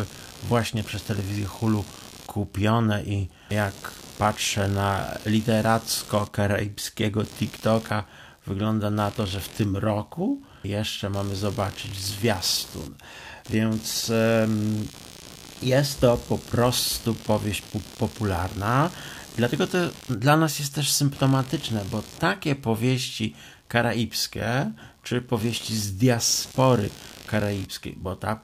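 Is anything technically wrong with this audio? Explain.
Yes. Computer activity noise runs through the whole speech clip. Processor, graphics or mouse load shifts the shared ground of the audio circuit. It comes through as a buzzy chirping around 70 Hz, roughly 20 dB below the speech, following the computer rather than the talker.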